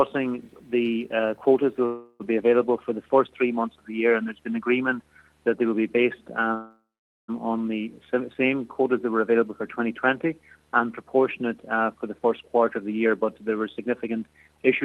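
A video or display buzz runs through the whole clip, about 40 dB below the signal. It is a buzz at 75 Hz with hash above it, the signature of a monitor or video cable coupling its field-rate interference into the audio wiring. It stays at a constant level under everything, and it is clearest in the pauses.

At 1.85 s comes the first call audio freeze, most likely from packets held up in transit that left the jitter buffer empty. For 344 ms, until 2.22 s, the receiver extends the last sound as a fading buzzy hiss, with only about 10 ms of true silence before playback resumes. Nothing is lost. The audio picks up where it stopped, so the gap simply pushes everything later.

A longer freeze of the same kind runs from 6.54 s to 7.30 s and inserts 745 ms. Here the concealment fades out, and roughly 460 ms of it is silence before the stream returns intact, now running 745 ms later than before.

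From 12.06 s to 14.84 s a jitter buffer speed-up follows. Having built up extra delay, the receiver trims short pitch-period-sized pieces over and over, removing about a fifth of a second in total. The audio plays at 108% speed with its pitch unchanged and sounds slightly hurried. Throughout, the Opus call path's band limit is audible as a cut-off above 12 kHz.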